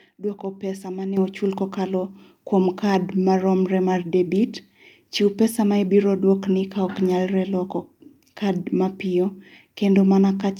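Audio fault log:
1.17 s and 2.19 s, microphone volume stepped up: the input gain is raised twice in single steps, first by about 8 dB and then by about 3 dB, as if the call software judged the microphone too quiet and turned up the device's input level. Because the change happens before any processing, speech and background noise jump together and stay louder afterward. On a waveform the envelope widens abruptly at each point. On a spectrogram every band brightens at once, noise floor included.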